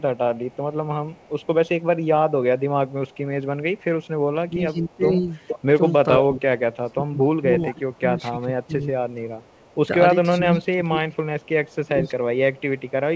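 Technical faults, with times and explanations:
0.0–1.47 s, 2.91–4.05 s, 5.47–6.22 s and 8.64–13.15 s, echo leak: a loudspeaker echo canceller likely failed to remove what its microphone picked up. A copy of the speech returns 475 ms late. It sits about 35 dB down in the first two stretches and about 30 dB down in the last, but at 5.47–6.22 s it rises to about 5 dB below the speech.
4.47–12.17 s, speech suppressed in double talk: with both sides talking at once, the echo canceller likely could not tell its own talker from the loudspeaker echo and turned both down. The speech dips by up to about 20 dB in patches totalling about 4 s.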